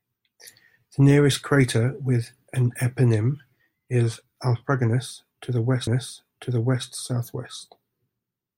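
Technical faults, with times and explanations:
5.87–6.86 s, stream segment repeated: just under a second of speech plays a second time, with a small blip where playback jumps back to the start of the repeated stretch, so the passage is heard twice and the clip runs about 0.99 s longer. This happens when the player fetches or queues the same chunk of the stream twice and plays both copies in sequence.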